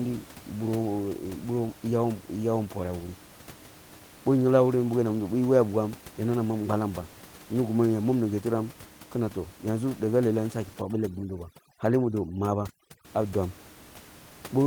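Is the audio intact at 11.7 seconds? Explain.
No. From 10.81 to 13.05 s, after "daga lealh ehn saki" and before "ah dwam", overdone noise removal pulls frequency bands near the noise estimate far down. The background drops and breaks up into twinkling specks. On a spectrogram, holes and scattered isolated bright dots replace the smooth noise floor.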